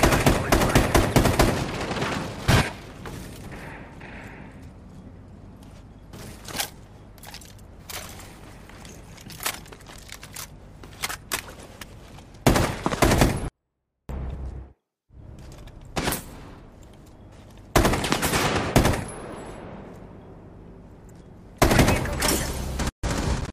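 A 24-bit alignment error (too quiet) runs from 13.48 to 14.09 s. For that stretch, samples packed into the low 24 bits of each 32-bit word are interpreted as full 32-bit values, so the sound stays clean but falls by about 48 dB, becoming nearly inaudible.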